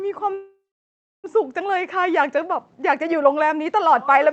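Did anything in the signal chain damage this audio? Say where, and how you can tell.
Yes. The damage most likely happened at the network and jitter-buffer stage of the call. Between 0.33 s and 1.26 s there is a call audio freeze: the speech stops, the last sound carries on as a fading fill, and the final 0.64 s or so is silent. Then the speech resumes where it stopped, with nothing missing. That pattern fits held-up packets emptying the buffer, with the gap adding about 0.9 s of delay.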